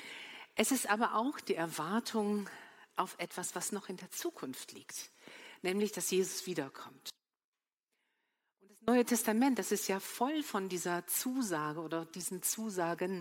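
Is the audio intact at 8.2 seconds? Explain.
No, 8.2 seconds falls inside an audio dropout to a faint residue running from 7.1 to 8.88 s, so about 1.78 s of the sound is missing. The signal cuts out abruptly instead of fading, leaving only a faint sound roughly 30 dB below its normal level, then snaps back. The likely cause is the feed being lost for a moment while the path after the break stayed live.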